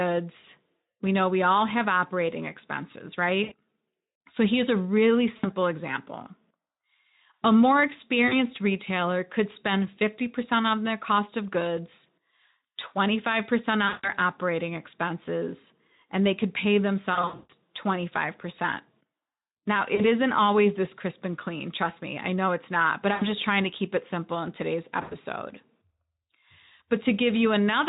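Through the light Speex coding of this speech, VoIP packet loss concealed by the speech codec strikes at 3.43, 5.37 (after "here's a really"), 8.27, 13.87, 17.13 (after "and they could pay", gaps scattered over 360 ms), 19.95, 23.13 (before "trying to keep it") and 25.01 s. The decoder extrapolates the last pitch and filter across 40 to 280 ms, so each gap becomes a fading buzzy tone or coloured noise, and the weakened sound lingers after packets return.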